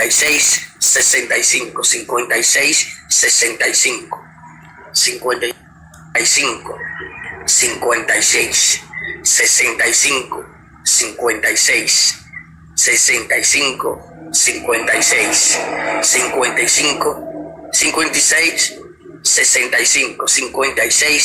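From 0 to 1.16 s, the program filling the ring buffer and the hardware reading it have slipped out of step, causing buffer tearing. A tiny slice of each period replays audio about 20 ms old with hard joins, producing a robotic 100 Hz buzz.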